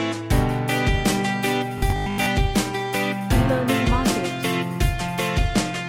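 From 1.78 to 2.26 s the sound turns into a rigid, metallic buzz locked at 50 Hz, still loosely following the original. This is robotic sound from repeated short buffers, likely caused by audio arriving too slowly, so a 20 ms fragment is replayed to fill gaps, with about half the material repeated instead of new.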